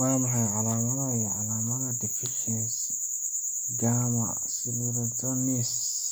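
No technical faults are audible anywhere in the recording.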